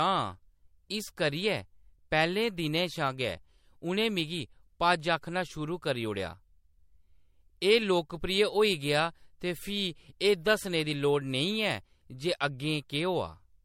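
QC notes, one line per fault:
Throughout, generation loss: the speech has a swirly, hollow, smeared quality, with consonant attacks blurred and nothing above 16.6 kHz. It's more watery than one pass at this bandwidth would give you, which fits an MP3 around 64 kbit/s that was likely decoded and re-encoded about four times. Each pass quantises on a shifted frame grid, so the noise and spectral holes stack up instead of staying put.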